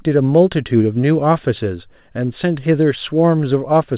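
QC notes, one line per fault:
No faults heard.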